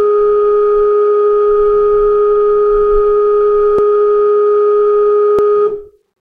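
At 3.79 s and again at 5.39 s the music jumps slightly forward with no gap, losing around 20 ms each time. This is likely a dropped buffer (overrun): samples were overwritten before being read, and the audio on either side was spliced together.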